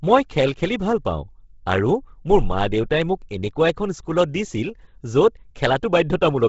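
Throughout, likely Bluetooth LC3 compression at a low bitrate strips everything above 7.7 kHz and coarsely codes the rest, giving the speech a breathy, grainy edge.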